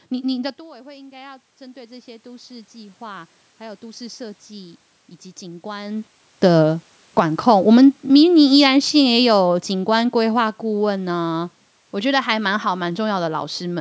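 From 0.39 to 5.96 s there is automatic gain rising. The talker moves back, the input drops about 19 dB, and gain climbs about 13 dB, swelling voice and room noise together. From 6.44 to 11.29 s, after the talker comes closer, automatic gain falling sets in. The speech starts loud, then sinks about 8 dB along with its background.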